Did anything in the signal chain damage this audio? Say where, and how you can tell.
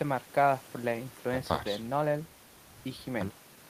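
No, nothing in this speech recording points to damage at any stage of the signal chain, from capture through to playback.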